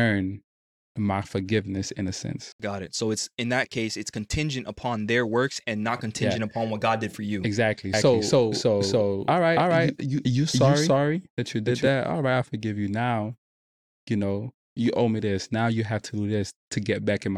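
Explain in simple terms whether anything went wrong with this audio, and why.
A doubled audio track runs from 7.93 to 11.87 s: the speech plays twice, the second copy about a third of a second behind and roughly as loud, starting and stopping abruptly. This is likely the sound being captured again through a slower path.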